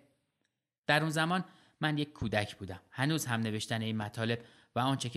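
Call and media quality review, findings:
Loud pop, 2.22–2.24 s and 4.02–4.04 s. A single sharp thump each time, peaking a few dB above the speech, which continues unbroken underneath. Likely cause is a voltage step from a connector, switch, static discharge or driver glitch, shaped by the downstream circuitry into a brief pulse. Unlike a dropout there is no gap in the speech, and unlike crackle there is one isolated event each time rather than a scattered run.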